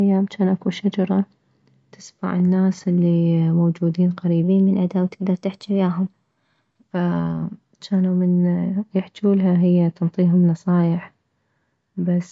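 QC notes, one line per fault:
4.44–6.83 s, wrong sample rate: after "تسمع الناس الي موجودين", 1.09× faster and 1.47 semitones higher, fitting 22 kHz audio played at 24 kHz; spectrogram harmonics sit higher and squeezed.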